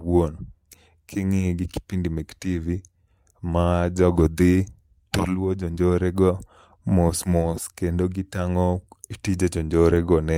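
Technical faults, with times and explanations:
Nothing stood out on listening to this speech recording.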